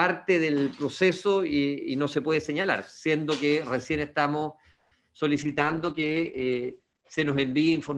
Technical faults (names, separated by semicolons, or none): call audio freeze; short concealed packet loss; call bitrate drop